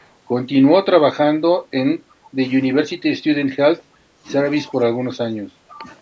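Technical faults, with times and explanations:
0.00–0.08 s and 2.24–2.30 s, echo leak: faint delayed copy of the speech, roughly 35 to 40 dB down, arriving 345 ms late, likely residual loudspeaker pickup slipping past the far end's echo canceller.
1.52–1.69 s, 1.95–2.38 s, 3.21–3.57 s, 3.76–4.24 s, 4.68–5.87 s, speech suppressed in double talk: the speech dips in pieces by roughly 15 to 25 dB, likely the echo canceller attenuating everything while both sides overlap.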